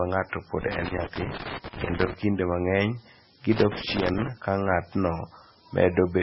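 From start to finish the speech carries a steady, thin hiss, loud and close to the signal's own level, that climbs sharply toward the treble. That is low bit depth with noise shaping: roughly 7 bits, with rounding error pushed upward. Unlike tape or mic hiss, it is tilted steeply high rather than flat.

Throughout, there is also nothing above 5.6 kHz, and the sound turns watery and swirly, with smeared attacks and chirpy s sounds. The likely cause is heavy MP3 compression at a bitrate near 16 kbps. A plain low-pass filter would dull the sound without this frame-to-frame warbling.

From 0.61 to 2.14 s an irregular burst of crackle and scratching breaks in. This is loose connector crackle, a worn or dirty contact making and breaking so the signal is chopped. Unlike the steady hiss, it is erratic and confined to that span.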